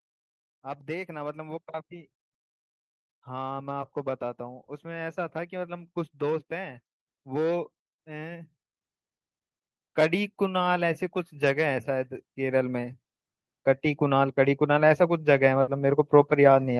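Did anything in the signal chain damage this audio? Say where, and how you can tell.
Yes. The automatic gain control in the call processing rose three times: from 3.24 to 8.53 s by about 8 dB, from 9.94 to 13.0 s by about 6 dB, and from 13.98 s to the end. Each time, voice and background swell together over several seconds, the signature of gain raised on a signal it judged too quiet.

A burst of packet loss on the network side hits at 15.61 to 15.70 s. The receiver's concealment stretches the last sound for about 60 ms, fading it into a held buzz or hiss. The audio then resumes roughly 60 ms further on, so that stretch of the signal is simply gone.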